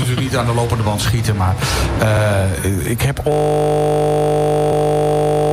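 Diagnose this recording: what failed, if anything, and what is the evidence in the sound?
A system hang loop at the driver or buffer stage begins at 3.32 s and lasts to the end. A 20 ms piece of audio repeats exactly, producing a steady 50 Hz buzz. A spectrogram shows stacked harmonics spaced 50 Hz apart, and the waveform shows one identical period tiled repeatedly.

Overlapping chunks from chunked processing occur at 4.72–4.77 s. At a join, 50 ms of audio plays twice because the next 2.5 s chunk starts before the previous one ended. The waveform shows a duplicated segment with a discontinuity at the seam. The spectrogram shows a brief vertical click line.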